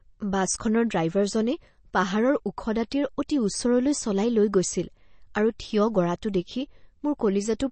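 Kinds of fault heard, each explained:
MP3 compression: Throughout the speech, nothing is heard above 8.3 kHz, and the damage is plainly audible as a watery, swirling texture with smeared attacks. This is likely an MP3 encoder starved of bits, which fits a bitrate around 32 kbps. With so little data, it removes all treble above a fixed cut-off and discards quieter frequency components. Those components flicker in and out between frames, creating the unstable, swirly character.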